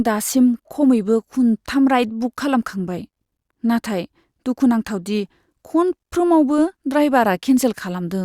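No audible technical faults.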